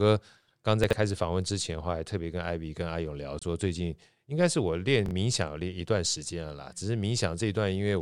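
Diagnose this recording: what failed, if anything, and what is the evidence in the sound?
At the buffer stage, chunks out of order: a 23 ms chunk played three chunks late at 0.84–0.93 s and one chunk late at 5.06–5.11 s, giving jumbled moments with hard joins.

A Bluetooth dropout is the likely cause of a silent gap of about 23 ms at 3.39–3.43 s, which fits one lost frame. The sound then resumes as if it had played on.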